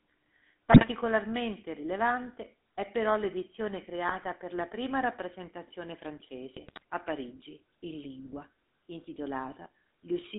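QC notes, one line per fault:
Throughout: GSM full-rate codec. The speech has the buzzy, gravelly roughness of the first GSM codec, which fits 13 kbps full rate. The decoder rebuilds the voice from a vocal-tract model driven by sparse, regular pulses. The band runs only from about 250 Hz to 3.6 kHz.
0.72–0.87 s, 4.08–4.25 s, 6.56–6.83 s: GSM bit errors. Three bursts of squawking, popping and gargling break through. Corrupted filter, pitch or gain values warp the spectrum or jump the level frame by frame. The last burst is the longest, spanning many frames.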